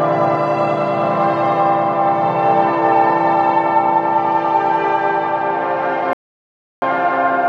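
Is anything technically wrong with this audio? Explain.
Yes, there's a rebuffering stall from 6.13 to 6.82 s: playback ran dry, went silent for about 0.69 s, then picked up exactly where it stopped, nothing lost.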